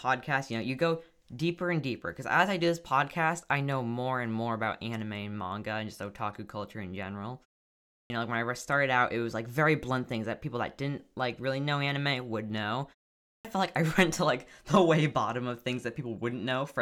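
At 7.83 s and 13.17 s, a clipped start after a pause: the output device, waking after pauses of 0.46 and 0.31 s, swallows about 270 and 280 ms of speech following "otaku culture in general" and "know anime would know". Speech resumes abruptly, its waveform jumping from flat silence straight into speech.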